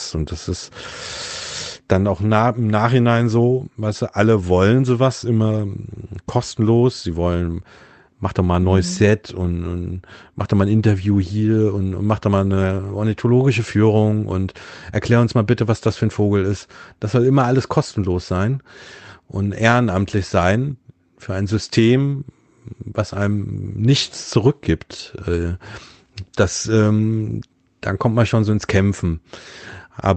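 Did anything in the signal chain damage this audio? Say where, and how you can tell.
No, nothing in the signal chain damaged this audio.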